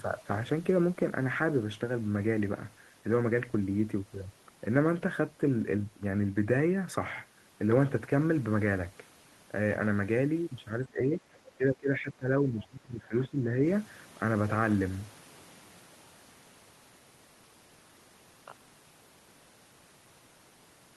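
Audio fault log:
10.85–11.4 s and 11.58–13.6 s, speech suppressed in double talk: the speech drops by up to roughly 15 dB, likely an echo canceller treating overlapping far-end sound as echo and attenuating everything; the waveform envelope sags and the spectrogram fades in those spans.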